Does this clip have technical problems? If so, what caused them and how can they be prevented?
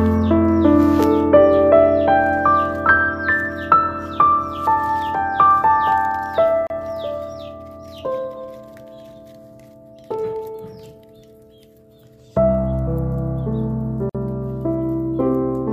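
Yes. A gap at a join of encoded pieces opens at 6.67 to 6.70 s, about 32 ms of silence, and again at 14.09 to 14.15 s, about 51 ms. Each piece was encoded separately and spliced untrimmed, so the encoder's start-up delay and final-frame padding sit as silence inside continuous sound, with smeared edges before the sound resumes where it stopped. To prevent it, encode the material as one continuous stream, or trim each piece's encoder delay and padding before joining.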